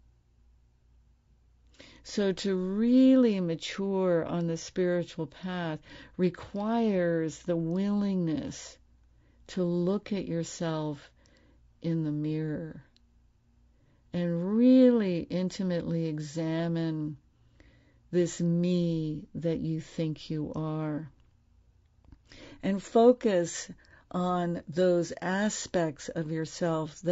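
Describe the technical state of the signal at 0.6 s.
At 0.6 s the speech sounds rough and grainy, with noise filling the gaps between harmonics and a thin, synthetic top band, as it does throughout the clip. The likely cause is low-delay AAC compression such as AAC-ELD, whose short frames resolve pitch harmonics poorly at a starved bitrate, plausibly near 32 kbps.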